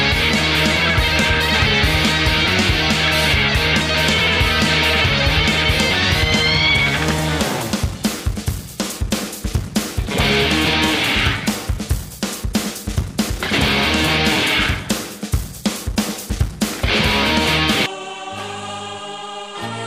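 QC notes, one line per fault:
10.35 s, bit error spike: a single sharp tick peaking at about -12 dBFS, caused by three consecutive corrupted samples that jump by a power of two and snap back. On the waveform it is a lone needle; on the spectrogram, a thin full-height vertical line.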